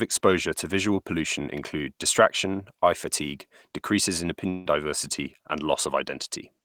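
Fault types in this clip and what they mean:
Long network dropout: Right after "eye fatigue decreases in", from 4.49 s to 4.67 s, the speech gives way to a fading continuation of the last sound lasting about 160 ms, with no stretch of true silence. The audio then resumes with that portion of the speech missing. This is likely a network dropout: the stream stopped arriving, and the receiver's concealment extended the final sound across the gap instead of playing what was lost.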